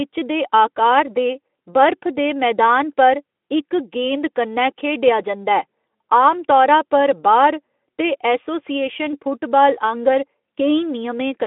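No technical faults occur in this speech clip, so there is nothing to describe in time order.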